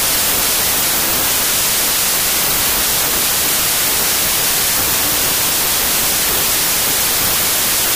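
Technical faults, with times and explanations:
Throughout, wrong sample width: loud noise buries the sound, which runs about 1.33 times fast and high; packed 24-bit samples were read as 32-bit, mixing bytes across samples.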